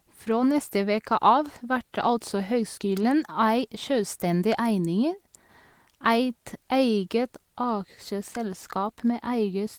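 No technical faults are audible.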